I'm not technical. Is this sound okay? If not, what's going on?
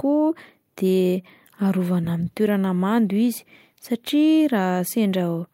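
Yes, it sounds fine.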